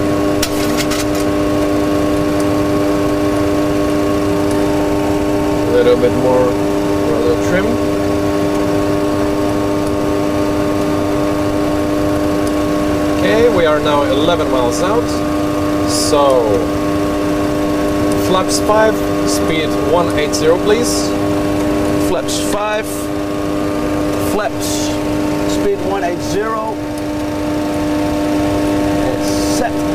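From 23.96 s to the end, crude rate conversion, which fits 48 kHz to 44.1 kHz by nearest-sample picking, adds a gritty, inharmonic fizz about 25 dB below the sound.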